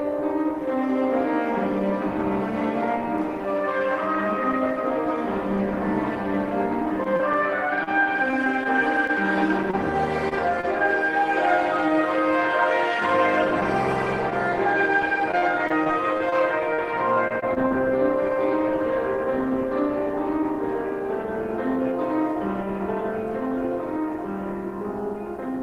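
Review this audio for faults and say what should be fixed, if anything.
Scattered short gaps, 7.03 to 10.65 s: roughly ten isolated packets went missing, each patched by extending the preceding sound. The result is brief ticks and smears rather than sustained choppiness. A larger jitter buffer would help absorb late packets.

Repeated packet loss (robotic sound), 14.3 to 17.73 s: twelve holes up to 40 ms were concealed in close succession, giving a choppy texture with pieces missing, unlike the earlier isolated ticks. Forward error correction or a more stable network path would reduce these losses.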